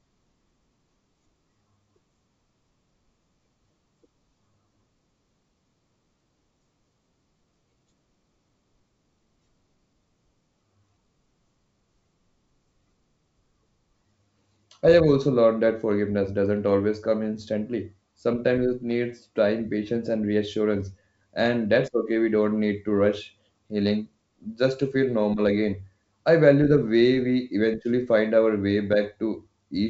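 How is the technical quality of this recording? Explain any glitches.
No audible glitches or faults.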